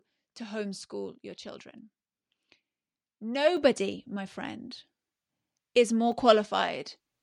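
At 3.57 s, just before "my friend", the speech and the background noise together jump louder by about 6 dB in a single step and stay there. This is a microphone volume stepped up: the calling software judged the input too quiet and raised the device's input level abruptly.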